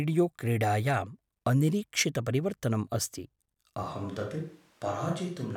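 At 3.85 s, right after "क्रीडायाम् अनिरीक्षितपरिवर्तनम् अस्ति", the speech abruptly turns roomy and hollow, losing its low-end body, and stays that way to the end of the clip. The loudness barely changes, but a background of room noise sits roughly 30 dB below the speech. This is a switch to a distant microphone: the close microphone's feed likely dropped out, leaving a mic farther away that picks up more of the room.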